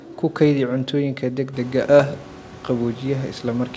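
There are no technical faults to describe in time order; the room noise that rises at about 1.5 s belongs to the recording space.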